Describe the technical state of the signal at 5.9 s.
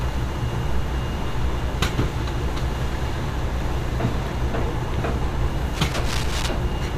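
At 5.9 s you're right in the middle of a burst of cable scratch noise, running from about 5.75 to 6.49 s. It's a dense, ragged crackle and rustle sitting on top of the sound, roughly 10 dB below the sound itself. The likely culprit is a worn cable, connector or control being nudged, so its contact resistance jumps around rapidly and spits those uneven bursts of noise into the signal.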